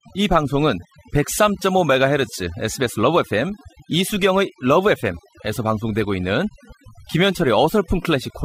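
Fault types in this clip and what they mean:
overdone noise removal: Background drops and breaks up into twinkling specks and quiet parts of the speech go with it, because an over-strong noise reducer cuts bands near its noise estimate.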